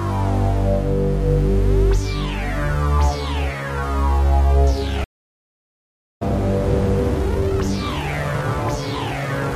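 A clip of sounds, broken by a stream reconnect from 5.04 to 6.23 s: the audio stops dead for about 1.17 s, and when it returns it has jumped ahead by roughly a second rather than picking up where it stopped. That skip is what separates it from a simple dropout, where the material would continue from the point of interruption. The cause is a broken connection, after which the player reconnected and restarted its decoder partway through the live stream.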